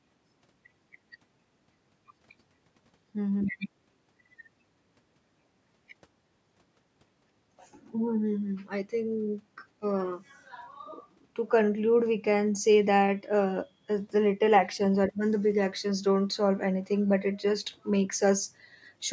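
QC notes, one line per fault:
No faults heard in this speech clip.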